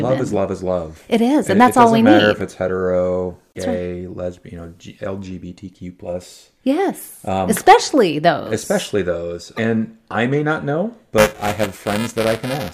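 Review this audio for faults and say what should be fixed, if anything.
Buffer tearing from 11.18 s to the end of the clip at 12.74 s: the software writing the audio ring buffer and the hardware reading it have drifted out of step, so their positions cross inside every period. A small slice of each buffer, under a tenth, replays audio from roughly 10 ms earlier, with hard joins on both sides. The speech takes on a robotic 375 Hz buzz, which fits a 128-sample buffer. Prevent it by keeping writes safely ahead of the read pointer, with adequate headroom and recovery on underrun.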